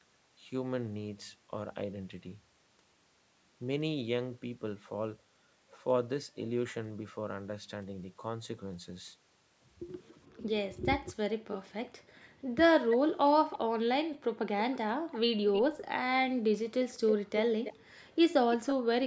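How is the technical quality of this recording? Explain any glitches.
The second half of this call recording has two related faults: the background is repeatedly switched off, and a delayed copy of the speech is heard. The band stops at 8 kHz, as expected from call microphone processing.

Background gated by the echo canceller, 10.28–15.41 s (about two seconds in total), 16.38–16.52 s and 17.46–18.89 s: while the far side played through a loudspeaker, its echo canceller turned the microphone down by about 40 dB. The room tone drops out, then returns.

Echo leak, 11.54–13.59 s, 14.73–15.85 s and 17.07–18.74 s: a second copy of the speech trails the original by about 319 ms. It sits about 15 dB below the speech, rising to about 10 dB below in the last stretch. The likely cause is a loudspeaker echo the canceller failed to remove.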